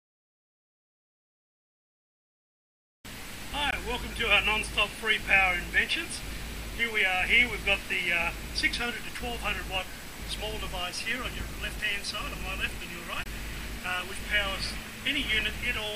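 At 3.71 s and 13.24 s the sound drops into a short hole of 20 ms and 23 ms: a block of digital silence, where zeros replaced the audio because the buffer went unfilled or a calculation failed. The second gap fits a 1024-sample buffer. Unlike a faded dropout, each cut stops and restarts abruptly.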